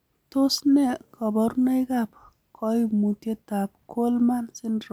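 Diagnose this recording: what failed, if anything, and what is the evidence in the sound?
Nothing failed anywhere in the chain here: there's nothing in the sound that points to a problem at any stage.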